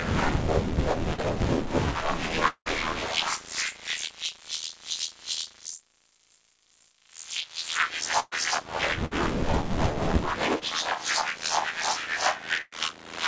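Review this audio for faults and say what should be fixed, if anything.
Short concealed packet loss occurs at 1.14 to 1.20 s, where about 40 ms of audio never reached the decoder in time, and at 10.59 to 10.63 s, where about 20 ms was lost. The receiver bridged each hole by extending the preceding sound, from its pitch if voiced or as shaped noise if not, then blended back, leaving a brief smear. Unlike the bursts below, these gaps are too short to fade or fall silent. Adding forward error correction or a little more jitter-buffer headroom would prevent this.

At 2.48 to 2.68 s, about 180 ms is missing, likely from a network dropout. The last sound is carried on as a fading buzz or hiss that ends in about 80 ms of silence before the audio resumes further on. That longer silent tail separates it from the bursts. A more stable connection, or redundancy to cover longer outages, would prevent it.

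Bursts of packet loss occur at 8.20 to 8.34 s (about 120 ms missing), 9.06 to 9.13 s (about 60 ms) and 12.61 to 12.73 s (about 100 ms). Each time the receiver held the last sound and turned it down, and at 8.20 and 12.61 s it reached about 30 ms of silence before playback jumped ahead. The audible fade sets these apart from the short smears. Redundant packets, better network quality or a larger jitter buffer would prevent them.

The call path itself, with nothing above 8 kHz, fits a wideband codec such as G.722 at around 64 kbps.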